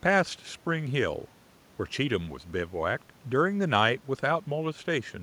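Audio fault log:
No fault was found in the audio.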